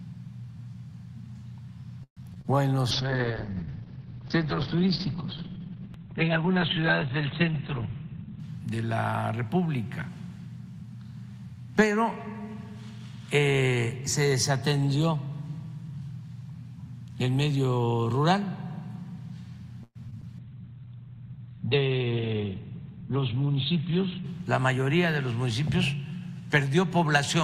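From 2.03 to 2.46 s there is repeated packet loss, heard as robotic sound. Three gaps land close together, the longest about 132 ms, and each is bridged by stretching the last received sound, so about 41% of the stretch is concealment. It sounds choppy and metallic, with small pieces simply missing. A spectrogram shows smeared, repeated harmonic bands with abrupt edges, and the waveform shows near-periodic copies and brief dropouts.

At 2.91 s a call bitrate drop begins, lasting until 8.46 s. The encoder falls from 64 kbps to 7 kbps and the audio band shrinks from 20 kHz to 4 kHz. The sound turns muffled and watery, with coarse, warbling texture. On a spectrogram everything above 4 kHz vanishes at once, leaving a flat ceiling, and the remaining energy looks blotchy and quantised.

Inside that stretch, from 7.44 to 8.18 s, a jitter buffer speed-up plays the audio at about 111% speed by cutting out short pitch-period pieces, roughly a tenth of a second in total. 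Pitch holds, but the sound feels hurried. On a waveform, events crowd slightly closer, with no change in harmonic spacing.

The pattern repeats later. Repeated packet loss from 19.83 to 20.24 s brings four gaps, the longest about 120 ms, with 36% of the stretch concealed. A call bitrate drop follows from 20.39 to 24.31 s, falling to 9 kbps with the same 4 kHz ceiling. Jitter buffer speed-ups at 21.95–22.41 s (112%) and 24.11–24.73 s (109%) each remove roughly 70 ms.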